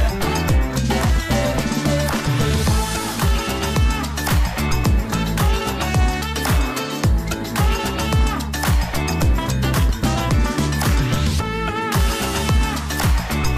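Nothing wrong technically; no faults found anywhere in the audio.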